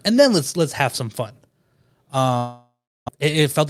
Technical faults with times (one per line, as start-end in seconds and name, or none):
2.37-3.10 long network dropout
3.18-3.67 jitter buffer speed-up